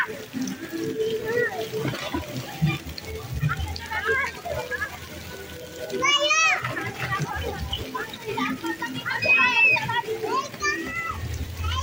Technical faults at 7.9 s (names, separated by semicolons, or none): none